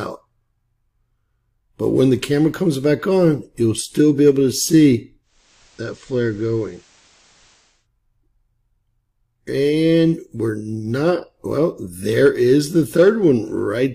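From 5.22 s to 7.88 s the sound undergoes a digital radio blending to analogue: the receiver lost its digital stream and cross-faded over roughly 0.38 s to the station's FM broadcast, then faded back. During that stretch the level drops by about 3 dB, and a hiss sits around 30 dB below the signal. A spectrogram shows a raised noise floor, and the waveform steps down slightly in amplitude.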